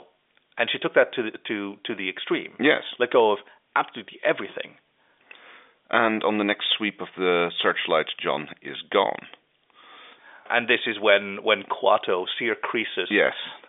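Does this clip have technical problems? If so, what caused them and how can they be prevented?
No, nothing stood out on listening to this speech, which comes through the narrow band of an ordinary telephone line.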